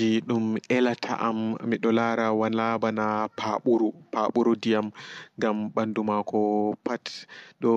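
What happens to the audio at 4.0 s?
Nothing goes wrong at 4.0 s: the speech carries straight through that moment with no dropout, click, distortion or other fault.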